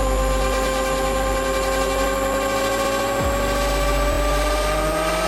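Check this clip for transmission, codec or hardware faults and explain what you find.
Two repeated-frame faults are audible. Repeated frames: compressed data was resent, so a 52.2 ms block at 2.84 s replays once and a 26.1 ms block at 4.12 s replays twice, each stuttering and adding 52.2 ms.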